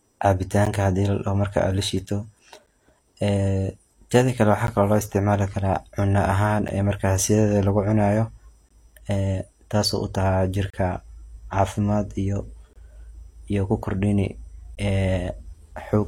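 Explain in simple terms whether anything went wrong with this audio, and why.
The speech cuts out in brief, hard-edged dropouts roughly every 2 seconds: at 0.65, 2.66, 4.67 (between "teda kale" and "kalo lo isticmaali karaa"), 6.68 (after "isticmaali karaa cuno ahaan"), 8.69 to 8.71 (just before "ee taasi"), 10.70 to 10.74, 12.73 to 12.76, and 14.75 s. This is a gap between stream segments. The audio arrives in 2-second pieces whose timing doesn't quite line up, so the player fills each mismatch with silence. No speech is lost.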